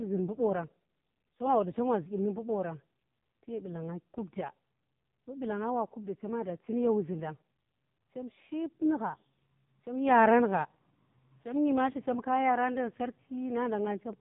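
From the start to the end of the speech, the AMR narrowband mobile codec has squeezed everything into a telephone band, with nothing above about 3.7 kHz. The vocal-tract model runs on very few pulses per frame, so the voice turns buzzy and synthetic, and the damage is heavy, which fits a low mode of around 5 kbps. A simple low-pass filter would dull the top without this robotic, frame-by-frame rebuilding.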